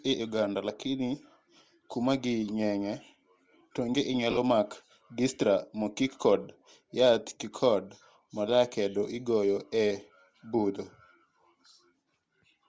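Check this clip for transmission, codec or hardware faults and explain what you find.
Two faults are audible in this speech: a coding artefact that runs through the whole recording, and a brief dropout just after 4.3 s.

Bluetooth LC3 compression, throughout: the speech carries a plainly audible breathy, grainy edge in its upper range. This is likely LC3 coding at a low rate. The texture points to around 32 kbps with 7.5 ms frames, where the encoder discards much of the fine high-frequency detail and the decoder fills those gaps with noise. On a spectrogram the upper band looks speckled and blocky rather than showing clean harmonic structure. Energy stops at 8 kHz, which reflects the call microphone processing band limit rather than this fault.

Lost LE Audio frames, from 4.31 to 4.38 s: about 45 ms of audio goes missing, scattered across a 60 ms stretch, with the longest single gap around 20 ms. 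That pattern fits six lost 7.5 ms frames. For each missing frame, the LC3 decoder replays the last good spectrum with randomised signs, so the harmonic detail of the speech breaks down into a short noisy smear. On a spectrogram the harmonic lines give way to diffuse, grainy texture across that window, and in the waveform the regular periodic shape turns ragged.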